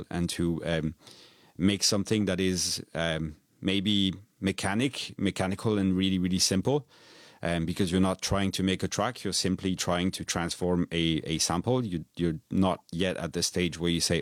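No technical faults are audible.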